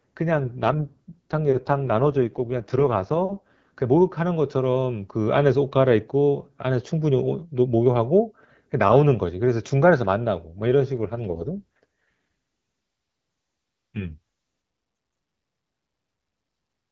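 From 0.36 to 3.71 s and again from 10.98 to 14.18 s, an AMR rate drop turns the speech rough and raspy, which fits AMR-WB falling from 12.65 to 6.6 kbit/s. Unlike packet loss or a narrowband fallback, there's no gap and the bandwidth stays the same.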